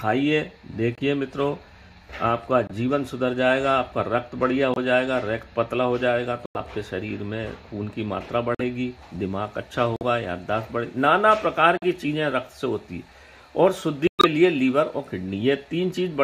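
Sudden dropouts to total silence cut in at 0.95 s, 2.67 s, 4.74 s, 6.46 s, 8.55 s, 9.96 s, 11.77 s and 14.07 s, lasting from about 40 ms up to the longest at 14.07 s of about 180 ms, with the timing of everything around them intact. These are corrupt frames muted: damaged compressed frames were rejected by the decoder and replaced with silence, and the gap lengths fit anywhere from a single frame to roughly seven in a row.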